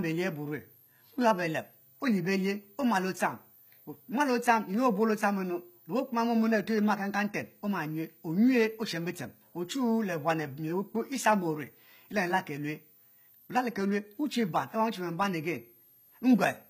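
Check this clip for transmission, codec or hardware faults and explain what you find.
Two faults run through the whole clip.

Throughout, a faint high whistle drifts between 13.2 and 13.8 kHz, roughly 30 dB below the speech. This is switching supply whistle from a power supply running in an audible burst mode or beating with another one.

Throughout, sibilants sound gritty and lispy over a bright but synthetic-sounding treble, with nothing above 14.9 kHz. This is likely HE-AAC compression at a low bitrate near 20 kbps, rebuilding the treble by copying lower bands upward.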